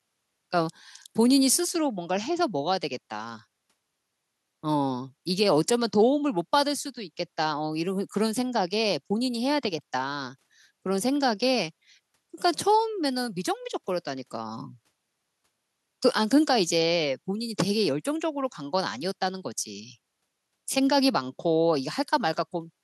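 No technical faults can be heard anywhere in the recording.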